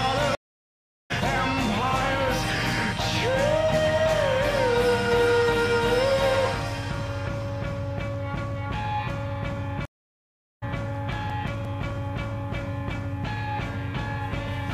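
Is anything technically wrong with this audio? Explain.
Yes, there are two kinds of trouble here.

The first is a stream reconnect, and it happens twice. At 0.35 s the sound drops out for about 0.75 s and comes back at 1.12 s. At 9.85 s it goes quiet again for about 0.77 s and returns at 10.64 s. Each time the connection broke, the player sat silent, then reconnected and started a fresh decoder partway through the stream. That's why the audio picks up a bit later than where it stopped, skipping roughly 0.4 s of material the first time and roughly 0.5 s the second.

Right after the second reconnect you get CD scratch ticks, eight of them between 10.95 and 12.18 s. Each one is a tiny click or dropout of just a few milliseconds. A scratch or blemish on the disc wipes out more data than the error correction can rebuild, and it comes around once per revolution. The player patches over those samples or mutes them, which gives you that regular ticking pattern.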